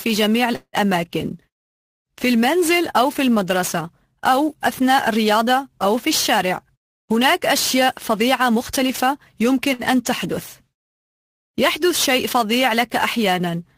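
Sample clock jitter runs through the whole recording. The converter's timing wanders by something like 10 µs, so each sample lands a little early or late. The resulting error follows how steeply the waveform is changing, sitting roughly 15 dB below the signal. It is heard as a grainy hiss that swells on loud, bright passages and disappears in pauses. On a spectrogram it shows as a wideband haze that tracks the signal's energy, densest above the strong high-frequency content and absent in gaps.

From 0.55 to 0.76 s there is a call audio freeze. The sound stops advancing and the last moment is drawn out as a fading buzz, ending in about 50 ms of silence. Then the audio resumes exactly where it left off, about 176 ms later than before, with nothing lost. The likely cause is packets held up in transit until the jitter buffer drained. A spectrogram shows smeared horizontal streaks decaying into a blank strip, and the waveform shows a tapering plateau followed by a flat line.

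Two jitter buffer speed-ups follow. The first, from 6.38 to 7.34 s, runs about 9% fast and sheds around a tenth of a second. The second, from 7.81 to 9.04 s, runs about 6% fast and drops roughly 70 ms. In both, the receiver snipped out many tiny pitch-period slices to shrink an overfull buffer. Pitch stays put but the pacing feels rushed. On a spectrogram, events crowd closer together and harmonic lines show faint repeated seams where slices were removed.

At 9.73 to 9.82 s comes a short stall from a late packet. The buffer ran dry, so the last sound was stretched for about 57 ms until the packet turned up, and playback then continued unbroken. It is heard as a sound held unnaturally long with a slight buzz. A spectrogram shows a brief frozen band of repeated spectral texture, and the waveform shows a short, periodic-looking stretch with a small dip in level.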